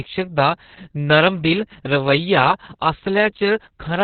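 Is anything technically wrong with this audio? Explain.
Yes, the whole clip carries heavy Opus voice compression. Nothing comes through above about 4.4 kHz, which points to the narrowband SILK mode at a starved rate, around 6 kbps. Coarse excitation coding leaves the speech muffled, hoarse and a bit robotic.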